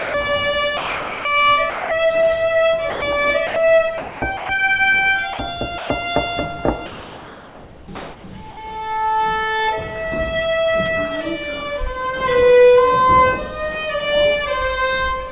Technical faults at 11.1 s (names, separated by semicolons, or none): none